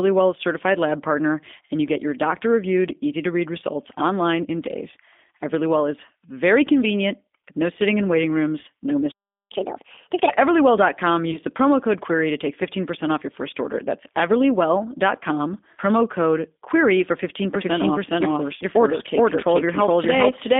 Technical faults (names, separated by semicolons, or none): G.729 codec; catch-up at higher speed; VoIP packet loss concealed by the speech codec; doubled audio track